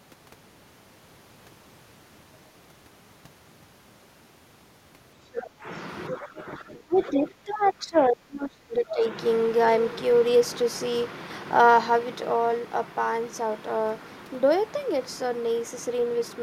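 From 5.32 to 5.5 s the other side's voice leaks through: a brief scrap of a second talker sits roughly 10 dB under the speech. The likely cause is far-end sound from the loudspeaker reaching the microphone and slipping past the echo canceller. At 5.61 s the speech is briefly suppressed in double talk. For about 50 ms the level sags by a few decibels, a slight dip rather than a dropout. This is likely the canceller attenuating the whole signal while both sides are active.

At 6.08 s another short fragment of the far end leaks in, fainter, around 15 dB below the speech, likely residual echo again. From 6.11 to 9.03 s the speech is suppressed in double talk far more heavily. For roughly three seconds the talker's level drops by as much as about 25 dB, so the voice sounds pushed back while the other side is speaking. The likely cause is the canceller failing to tell near-end speech from echo and turning both down.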